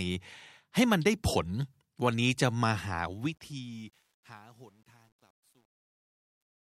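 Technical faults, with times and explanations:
2.72–6.79 s, truncation distortion on a fade: as the speech fades out, undithered gain steps, consistent with a 10-bit path, turn the quiet tail gritty from 3.75 s. The waveform shows square staircase steps, and the spectrogram shows broadband hash.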